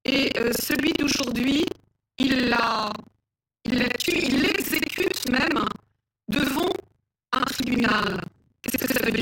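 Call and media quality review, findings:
Buffer tearing, entire clip. Steady 25 Hz robotic rattle on speech, silent in pauses. Playback ring buffer: writer and reader crossed, so roughly a third of each 40 ms period replays audio about 70 ms old. Unlike dropouts, no gaps.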